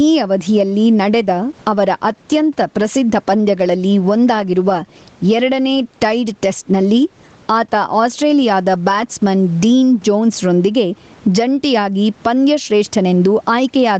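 Speech, with gain pumping running the whole way through: the gain swings by around 15 dB, likely from input gain set far too high with a fast limiter pulling it back down.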